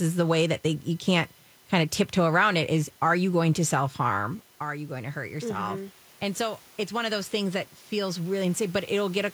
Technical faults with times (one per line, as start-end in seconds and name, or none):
4.13-7.42 automatic gain rising